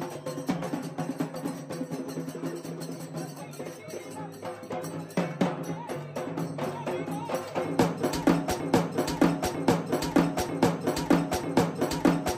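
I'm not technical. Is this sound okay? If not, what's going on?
No. From 8.60 s to the end, the sound turns into a broken-record loop: a piece just under one second long (about 0.94 s) plays four times back to back, identical each time, and never moves on. This likely comes from the player, encoder or stream stalling and resending the last fragment it held. Whatever should have been heard in those final seconds is missing.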